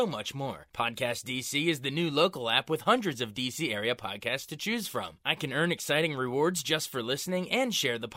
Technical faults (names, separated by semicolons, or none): none